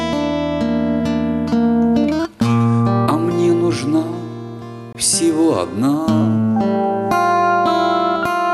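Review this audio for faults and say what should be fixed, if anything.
A gap at a join of encoded pieces opens from 4.93 to 4.95 s, a silence of about 21 ms cut into otherwise continuous sound, after which the sound resumes exactly where it left off. It comes from two separately encoded segments butted together untrimmed: the encoder's start-up delay and final-frame padding both survive at the seam. On a waveform it shows as a short flat run whose edges are smeared by the codec. A spectrogram shows it as a thin vertical blank stripe across all frequencies. To prevent it, trim each segment's encoder delay and padding using its gapless metadata before joining, or encode the material as a single continuous pass.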